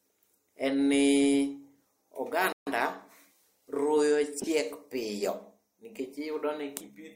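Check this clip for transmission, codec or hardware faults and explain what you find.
Two faults are audible: a playback stall and a corrupt frame decoded.

The playback stall runs from 2.53 to 2.67 s. The speech cuts out mid-flow and the output goes silent for about 143 ms. The likely cause is the player running short of data, or its output thread being held up, so nothing reached the output until it caught up. The result is a clean, sudden gap rather than a fade.

The corrupt frame decoded falls between 4.40 and 4.50 s. For roughly a tenth of a second the speech turns into a chirp, squeak, blip or burst of noise. Damaged bits in the compressed data were decoded anyway, so gains and spectral values landed in the wrong places. The length fits a handful of consecutive frames being hit.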